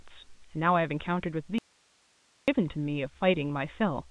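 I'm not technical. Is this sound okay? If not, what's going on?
No, not quite. From 1.58 to 2.48 seconds the speech suddenly vanishes for about 0.9 s, leaving only a faint hiss, then snaps straight back. That's an audio dropout to a faint residue. The cut is too abrupt to be a natural pause, and the hiss means the line stayed open while the voice itself was lost, most likely somewhere along the way. The rest has the narrow, telephone-style sound of ordinary phone coding.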